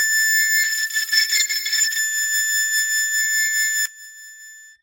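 From 0.64 s to 2.05 s there is a call bitrate drop: the encoder's budget fell from 48 kbps to 10 kbps, staying at the bottom for about 1.3 s. The music turns coarse and watery, with its upper frequencies shaved away, until the bitrate climbs back.

At 3.86 s, one channel inverted is the likely cause when the stereo mix reaches a mono sum. The shared centre content cancels, and the music falls by about 20 dB to a faint remnant that lasts to the end.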